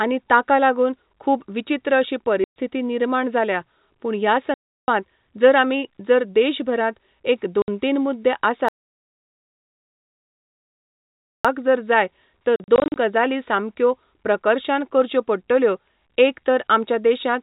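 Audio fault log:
2.44, 4.54, 7.62, 12.56–12.96 s: packet loss filled with silence. Hard-edged holes of 120 ms (after "लागून खूब विचीत्र अशी"), 340 ms (before "जर आमी जर") and 60 ms (before "तीन मुद्दे"), then scattered bursts no longer than 40 ms. The lengths are multiples of 20 ms, which fits 20 ms packets.
8.68–11.45 s: audio dropout to silence. A single continuous gap of about 2.8 s of silence with no room tone. It does not break into packet-sized chunks, so the likely cause is a lost input or a stray mute.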